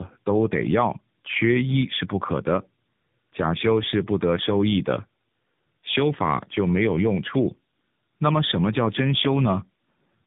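All the way through the speech you can hear tandem speech coding. It sounds like two AMR-NB-style coders in a row, with a plain narrowband link between them, each re-coding the last one's damage. Nothing gets past 3.8 kHz, and the result is rougher, noisier, muffled and warbly.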